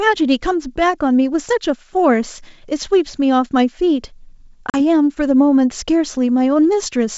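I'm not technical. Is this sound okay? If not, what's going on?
No. At about 4.70 s the speech drops out for a split second, with hard edges rather than a gentle fade, and ends by 4.80 s. When it comes back, it sounds briefly off before it settles within a few hundredths of a second. This is packet loss on an ADPCM call: a couple of packets, about 40 ms of sound, went missing and were replaced with silence. The receiving end's running prediction of the sound then no longer matched the sender's, so it needed a moment to catch up.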